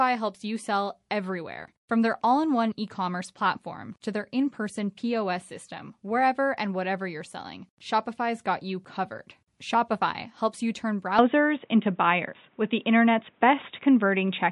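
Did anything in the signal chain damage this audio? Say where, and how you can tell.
Yes. The codec stage shows damage throughout the speech. The treble is cut off and the highs sound watery and swirly, with weak detail flickering in and out from frame to frame. Attacks are smeared. The damage is plainly audible. This is likely MP3 compression, and the sound points to a low bitrate of around 48 kbps. At that rate the encoder runs short of bits, so it drops the top band and zeroes quieter frequency lines.

There is a pre-echo at 4.01 s, between "one e commerce platform" and "to their in person". A short hiss of about 10 ms comes just before a sharp onset, with noise about 12 dB above the quiet floor. This happens in the codec. The transform spreads quantisation noise across its whole block, which fits a 48 ms window. Without short blocks, the noise sized for the attack leaks into the silence before it.

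From 11.19 s to the end, after "helps you turn", the sound turns dull and boxy. Nothing is left above 3.8 kHz. There is no gap at the change. The level shifts by a few decibels and a new, faint noise floor appears well below the speech. The cause is likely the input being switched to a poorer device, a narrower-band microphone or a headset call profile, at the capture stage.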